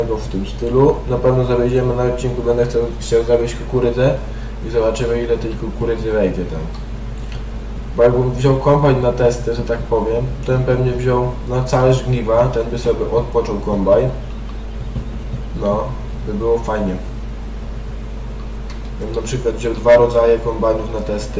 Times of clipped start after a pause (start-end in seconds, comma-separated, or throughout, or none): none